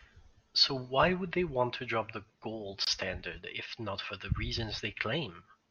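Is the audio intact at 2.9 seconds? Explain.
No. A gap at a join of encoded pieces runs from 2.85 to 2.87 s. Untrimmed encoder padding leaves a 23 ms gap, its edges smeared by the codec. The speech then resumes where it stopped.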